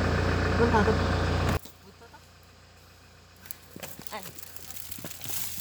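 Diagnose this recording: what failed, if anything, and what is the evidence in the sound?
From 1.57 s to the end, the sound collapses to a faint, hollow residue, roughly 21 dB quieter than before, as though the centre of the image has been scooped out. The likely cause is one channel inverted, a polarity flip that most often happens at the analogue wiring stage, such as a swapped hot and cold pair. When the two channels are summed to mono, everything they share cancels, leaving only their small differences.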